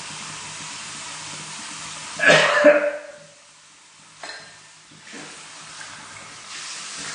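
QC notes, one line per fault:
Throughout: AAC compression, likely from AAC-LC coding at around 32 kbps, which starves the spectrum of bits and cuts everything above 9.8 kHz. The audio sounds plainly dull and smeared, with a warbling, fizzy texture where quantisation leaves holes in sustained content.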